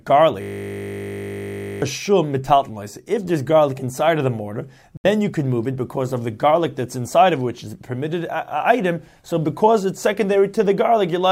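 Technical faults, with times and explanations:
0.42–1.82 s, system hang loop: a single 20 ms stretch of audio repeats exactly, about 70 times at 50 Hz, producing a steady buzz. The system stalled while the hardware kept replaying one ring buffer, and roughly a second and a half of audio never plays.
4.97–5.05 s, Bluetooth dropout: a silent hole of about 70 ms, after which the sound resumes further on, as though it had kept playing. This is likely wireless packets arriving too late and being discarded, which fits roughly three lost frames.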